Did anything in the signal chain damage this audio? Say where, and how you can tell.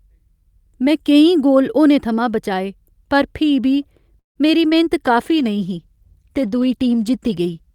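Yes. At 4.19–4.39 s, just after "फ्ही बी", there is a call audio freeze in the network and jitter-buffer stage. The last sound trails off and leaves about 130 ms of near-silence. The waveform shows a decaying tail then a flat stretch. Nothing is lost; the speech resumes where it stopped, most likely because delayed packets let the buffer run dry.

Right after "फ्ही बी मेरी", at 4.68–4.74 s, a short concealed packet loss occurs in network transport and decoder concealment. About 40 ms never arrived, and the decoder extrapolated the preceding sound before crossfading back. The spectrogram shows a brief smeared patch where fine detail goes blurry.

From 5.07 s to the end, a call bitrate drop affects the codec stage. The encoder falls from 64 to 21 kbps, so Opus quantises more coarsely and the speech turns rougher and watery. On a spectrogram, the harmonics look blotchier and less defined than before.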